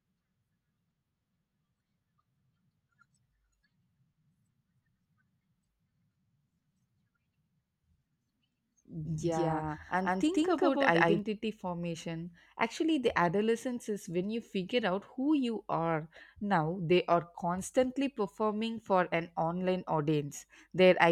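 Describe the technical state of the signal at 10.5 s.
At 10.5 s the speech is heard twice, a second equally loud copy trailing about 150 ms behind: a doubled audio track from 9.05 to 11.19 s, likely from a second, slower capture path.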